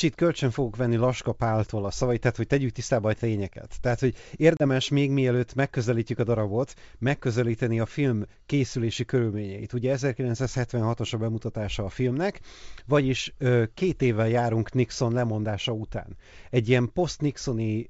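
At 4.57 s there is a case of packet loss on an ADPCM call. The speech, carried by G.722 wideband coding at a rate that fits 64 kbit/s, drops into a hard-edged silent gap about 30 ms long, which suggests a few packets were lost. The decoder's adaptive predictor and step size then no longer match the sender's. The sound returns slightly distorted, and it settles by about 4.64 s.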